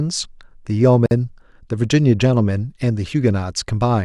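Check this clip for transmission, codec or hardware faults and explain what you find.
One codec fault is present in the speech. At 1.06 to 1.11 s, a gap at a join of encoded pieces: separately encoded segments were spliced untrimmed, leaving encoder delay and padding as a 50 ms silence. The waveform drops to a flat line with smeared edges, shown as a blank vertical band on a spectrogram, then the sound resumes where it stopped.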